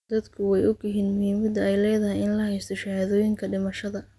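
No technical faults can be heard anywhere in the recording, and the speech signal stays intact and continuous throughout.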